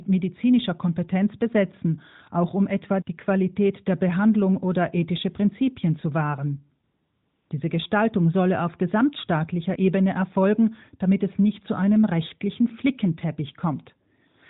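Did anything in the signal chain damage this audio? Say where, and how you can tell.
Yes. At the codec stage, the AMR narrowband link's discontinuous transmission replaced real background with AMR comfort noise from 6.84 to 7.50 s, a gap of about 660 ms. The phone judged the talker silent, stopped sending speech frames, and the receiver synthesised noise from a rough level and spectrum estimate. You hear it as a smooth, steady hiss that switches in and out. Unlike a noise gate or a network dropout, the pause never falls to true silence.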